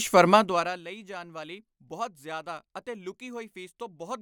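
A fine ticking rides on the speech from 0.30 to 0.87 s as the level falls by around 20 dB, just before "ਜਾਨ ਵਾਲੀ ਬਹੁਤ ਜ਼ਿਆਦਾ". This is zipper noise: the gain drops in unsmoothed 1 dB steps, about forty per second, each leaving a small click.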